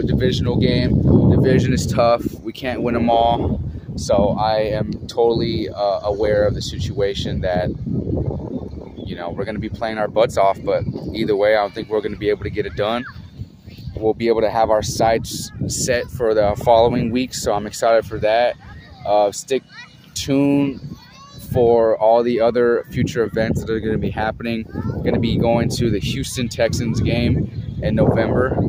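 No technical faults can be heard anywhere in this recording.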